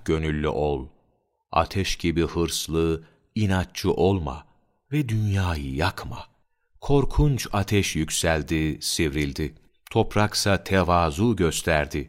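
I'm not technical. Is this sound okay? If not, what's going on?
No, there are faint, regular clock slip clicks, soft ticks roughly every third of a second, about forty in all, from 0.26 s to 11.8 s. This is likely two devices running on unsynced clocks, so a single sample keeps getting dropped or doubled.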